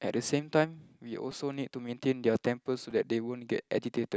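Speech, with a repeated buffer at 1.32 s and 2.91 s: a 5 ms block plays two extra times, and the hard joins make a tiny click-buzz rather than silence, which sets it apart from a dropout. Late-arriving audio makes the device replay its last buffer, and about a hundredth of a second of real audio is lost.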